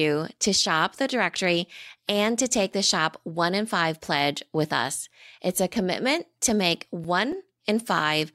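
A short speech recording has a run of five small, evenly spaced ticks between 6.48 and 7.60 s, each a brief click or dropout of only a few milliseconds. These are CD scratch ticks: a surface blemish passes the laser once per disc rotation, the damaged samples are beyond error correction, and the player interpolates or mutes them.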